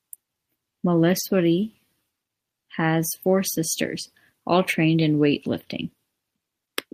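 At 1.19 to 1.21 s, a lost packet rebuilt from error correction: the decoder filled the gap with a low-bitrate copy, so this 20 ms stretch of speech sounds briefly rougher and noisier.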